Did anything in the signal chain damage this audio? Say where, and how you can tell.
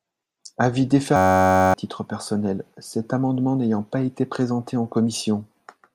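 Yes. From 1.16 to 1.74 s the speech stops and becomes a steady buzz at about 94 Hz, just before "titre personnel cet amendement". This is a system hang loop: the driver stalled while the hardware replayed one 10.67 ms buffer, fitting a 512-sample buffer, and about half a second of speech was lost.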